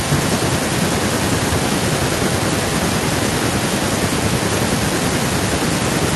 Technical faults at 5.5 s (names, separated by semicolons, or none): none